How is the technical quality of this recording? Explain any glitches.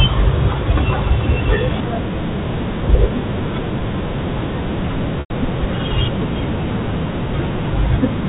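One glitch stands out in this telephone-band speech. The G.711 telephone coding limits everything to below 4 kHz.

Packet loss with pitch repetition, 5.2 to 5.3 s: about 100 ms of audio went missing, which fits five 20 ms packets. The receiver repeated the last pitch period, which gives a brief buzzy hold that fades to silence before speech cross-fades back.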